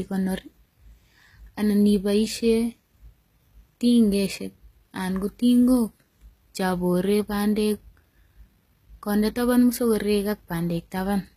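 A speech clip with plainly audible HE-AAC compression throughout. Nothing sounds above 14.9 kHz. The treble is likely rebuilt by spectral band replication, so s sounds come out gritty and metallic. The damage fits a low bitrate around 20 kbps.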